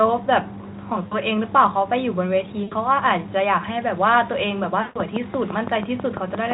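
VoIP packet loss concealed by the speech codec appears at 1.07 to 1.17 s, 2.63 to 2.73 s and 4.82 to 5.00 s. These are gaps of 40, 80 and 140 ms, which fit lost 20 ms frames. The decoder stretches the last sound into a fading buzzy tone or coloured noise, and the speech stays weak briefly afterwards. A train of clicks runs from 4.64 to 6.52 s, with roughly ten regular pops at about 5.9 per second, peaking about 15 dB above the speech and likely caused by electrical interference.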